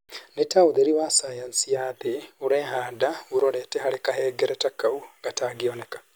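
No technical faults are audible.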